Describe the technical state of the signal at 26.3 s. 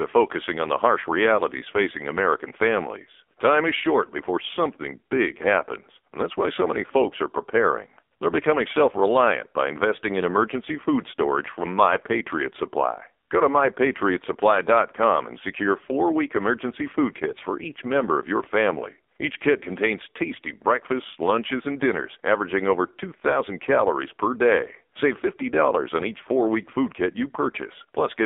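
At 26.3 s you're hearing AMR narrowband mobile codec damage that runs through the whole clip. The speech is squeezed into roughly 250 Hz to 3.6 kHz, and heavy pulse-driven vocal-tract modelling leaves it buzzy and synthetic, which fits a very low bitrate near 5.9 kbps.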